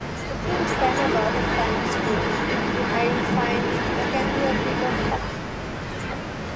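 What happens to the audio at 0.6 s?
An echo leak runs through 0.6 s, part of a stretch from 0.42 to 5.15 s. A second copy of the speech trails the original by about 260 ms, arriving at roughly the same loudness, so the two overlap. The likely cause is a far end playing the call on a loudspeaker whose echo canceller did not remove all of what its microphone picked up, sending it back into the call.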